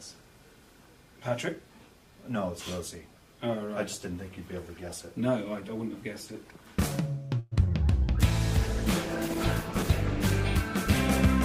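At 7.39 to 7.54 s the audio stretches into a fading buzz for about 121 ms, then resumes with nothing lost. This call audio freeze is likely packets arriving late and draining the jitter buffer. At 7.64 to 7.66 s a short concealed packet loss leaves a brief smear where about 20 ms never arrived and the receiver filled the gap, pulling the timing back by roughly that much. From 8.29 to 10.52 s a call bitrate drop makes the sound coarse and dull for just over 2 s, which fits the encoder falling from about 128 to 14 kbps.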